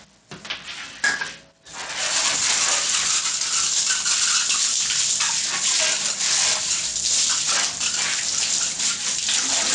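From start to finish, the level sinks by roughly 5 dB beneath each louder event, so soft and loud moments sit unnaturally close and everything feels squashed. This gain pumping likely comes from input gain set too high, with a fast limiter clamping down on each peak.

Throughout the clip, the upper range sounds thin and unstable, with treble that flickers in and out and a gritty, grainy edge clinging to the sound, all within a band that already stops near 8 kHz from the call's microphone processing. That is likely Bluetooth SBC compression starved of bits, consistent with a bitrate around 80 kbps, where the weak top sub-bands lose their bits and the rest are coarsely quantised.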